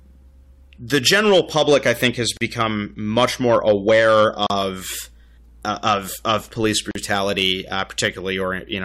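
From 0.94 to 2.07 s the loud parts of the speech take on a gritty crackle. This is hard clipping: the signal is driven about 4 dB past what a stage in the chain can carry, so its peaks are sheared flat, and those squared-off tops throw harsh harmonics high into the spectrum. The same crackle returns from 3.17 to 4.61 s and from 6.29 to 8.08 s, at about the same degree of overload.

At 2.37 to 2.41 s the sound drops out for about 39 ms, then resumes exactly where it left off. Similar dropouts occur at 4.47 to 4.50 s (about 34 ms, inside the second clipped stretch) and at 6.91 to 6.95 s (about 42 ms, inside the third). Each is a gap at a join of encoded pieces. Separately encoded segments were spliced without removing the encoder's start-up delay and end-of-segment padding, so a short silence sits at each seam, its edges slightly smeared by the codec.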